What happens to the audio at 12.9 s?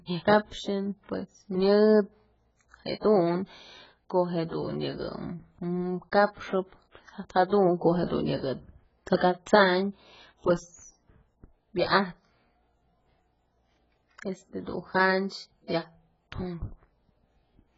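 At 12.9 s the speech carries the same damage heard across the whole clip: dull, smeared tone with a warbling, fizzy edge on sibilants, and nothing above 7.7 kHz. That is likely heavy AAC compression, which fits AAC-LC at a very low bitrate near 12 kbps, with the encoder lowering its cut-off and starving frequency bands. A simple low-pass filter would only darken the sound; the swirling texture and patchy spectrum point to a codec.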